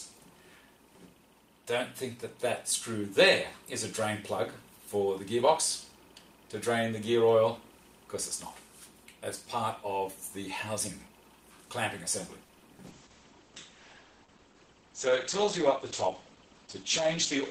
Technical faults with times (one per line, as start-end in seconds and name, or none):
12.46-12.51 short stall from a late packet
12.59-12.81 short concealed packet loss
12.88-17.51 call bitrate drop